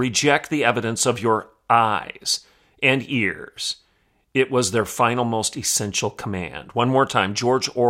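Nothing in this speech recording stands out as a technical fault, so there's nothing to flag here.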